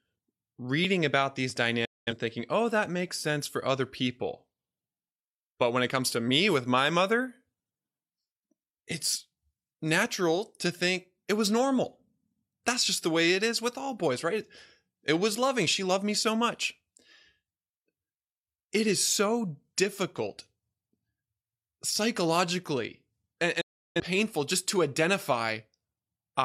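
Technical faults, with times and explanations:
1.85–2.13 s and 23.61–24.00 s, digital broadcast dropout: the speech fades out in about 8 ms and goes silent while the receiver mutes on bad frames, so those stretches are lost.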